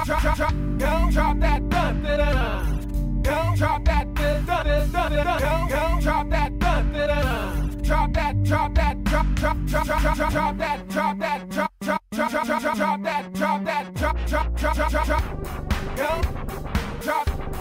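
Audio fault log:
No audible faults found.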